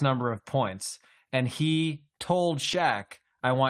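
From 2.63 to 2.93 s, just after "he told", the speech turns rougher and noisier without any gap or dropout. This is a lost packet rebuilt from error correction: about 160 ms of audio was replaced by lower-bitrate backup copies carried in the following packets.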